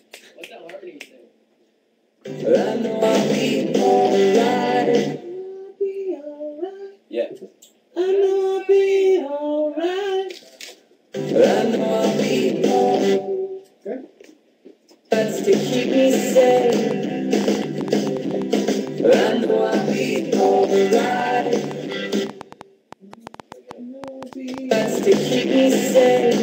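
From 16.43 s right through to 26.39 s there's a train of clicks, about 5.7 per second at an uneven pace, something like fifty in all. Each is a sharp, similar pop a bit above the level of the sound, ticking through the pauses too. Likely interference or a faulty connection.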